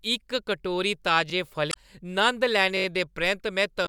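At 1.30 to 1.32 s a brief, hard-edged stutter occurs as one slice of the speech plays twice with an abrupt join. This is a repeated buffer. Fresh audio failed to reach the output in time, so the device replayed the last block once more. The 21 ms repeat fits a 1024-sample buffer, and because the stream simply waited, nothing is skipped.

From 1.69 to 1.75 s a short glitch breaks through. This is damaged data in a compressed stream. Corrupted bytes made the decoder misread its frames and lose sync until it locked onto the next valid frame header.

At 2.77 to 2.86 s a longer stutter appears. The same 21 ms block sounds five times in a row, four extra plays, with a hard seam at each repeat. It is another repeated buffer, this time from a longer wait for audio, and again nothing is lost.

From 3.83 s to the end of the clip, a second burst of damaged data in the compressed stream produces a similar brief blip as the decoder again stumbles over corrupted frames.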